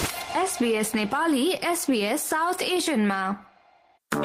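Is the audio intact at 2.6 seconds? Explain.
Yes, the audio is intact at 2.6 seconds, with no dropout, click, distortion or other fault heard at that point.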